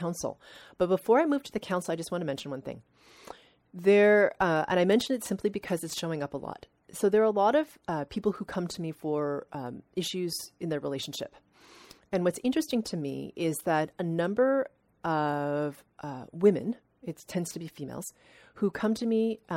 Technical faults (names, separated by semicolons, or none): corrupt frame decoded